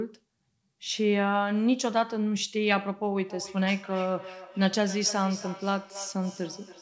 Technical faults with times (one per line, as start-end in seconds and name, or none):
3.17-6.81 feedback echo between two devices